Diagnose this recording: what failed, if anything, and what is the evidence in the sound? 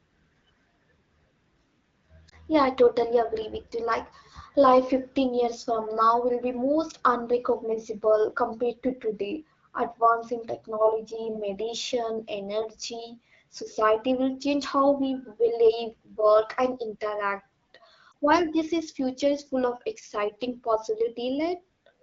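Lost AMR speech frames at the network stage, at 2.29–2.38 s and 18.11–18.14 s. Each is a brief dip or warble that fits a single corrupted 20 ms frame. The decoder repeats the last pitch and spectral settings at reduced gain, which shows as smeared, flattened harmonics on a spectrogram and a small amplitude sag in the waveform within the AMR-WB stream.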